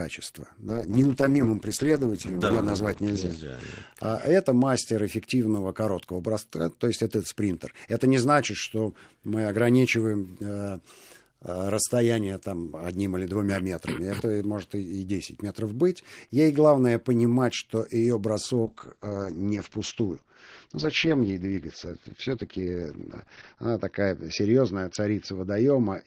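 From 0.7 s to 3.97 s there is a call bitrate drop. The encoder was given far fewer bits, which fits a fall from 32 to about 10 kbps. The speech is coded more coarsely. Everything above 8 kHz is cut, so it sounds muffled. It clears just before "а это мастер эффективного". A second drop starts at 18.67 s, after "главное понимать что ее". It goes lower, fitting about 8 kbps, with a 6 kHz cut-off. It never recovers before the clip ends.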